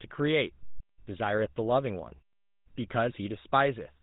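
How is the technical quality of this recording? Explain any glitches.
The recording carries plainly audible GSM full-rate codec damage from start to finish. The speech has the buzzy, gravelly roughness of that early mobile-phone coder, which fits a rate of about 13 kbps. The coder imitates the vocal tract and feeds it a coarse pulse train that keeps only a third of the excitation samples, so the voice sounds rasped rather than simply dull, with nothing left above 4 kHz. That grit is what separates it from plain band-limiting, which only muffles. The pauses drop to silence as intended.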